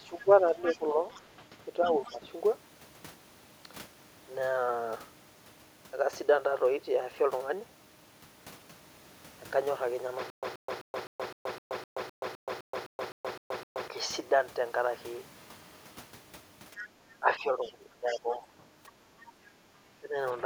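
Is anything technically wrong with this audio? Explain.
Yes, this speech clip has four kinds of echo-canceller and playback faults.

Speech suppressed in double talk occurs at 0.0–2.31 s, 17.19–18.43 s and 19.82 s to the end. The talker's voice dips by roughly 15 dB in the first stretch and roughly 20 dB in the later two, for about a second each time and about half a second at the end. This is likely an echo canceller that could not tell the talker from the loudspeaker echo and turned both down. Unlike background gating, the voice itself sinks.

The other side's voice leaking through can be heard at 0.6–2.17 s and 17.61–19.27 s, overlapping those suppressed stretches. A second voice sits roughly 15 dB and then roughly 20 dB below the talker. The likely cause is an echo canceller leaving part of the loudspeaker signal in the microphone pickup. This differs from suppression because something extra is added rather than the talker being lost.

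A stutter with silent gaps runs from 10.30 to 13.88 s. A fragment of about 130 ms repeats over and over, each copy followed by about 126 ms of digital silence, so it recurs every 256 ms. This points to a player or stream that likely stalled and replayed its last fragment on each retry. The material that should have played in that span is lost. A dropout would leave a gap without repeating anything.

The background is gated by the echo canceller at 16.82–16.91 s. The room sound drops by about 7 dB for roughly 70 ms while the loudspeaker plays, then recovers once the canceller releases. Only the ambience ducks here, which distinguishes it from double-talk suppression of the voice.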